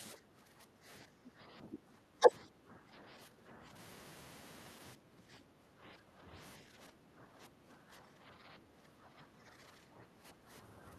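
Speech whose room background repeatedly sinks and returns: the ambience drops by about 13 dB from 0.18 to 0.85 s, about 11 dB from 2.6 to 3.64 s, about 13 dB from 4.96 to 6.32 s and about 11 dB from 6.63 s to the end. This is background gated by the echo canceller, which clamps the microphone while the far-end loudspeaker plays. Between these, the talker's own sound is briefly pulled down at 1.24–1.3 s, 1.72–1.8 s and 2.2–2.32 s, each dip lasting well under a tenth of a second, around 15 dB deep for the first two and only a few dB for the third. The likely cause is speech suppressed in double talk, where the canceller mistakes near-end speech overlapping the far end for echo and attenuates it.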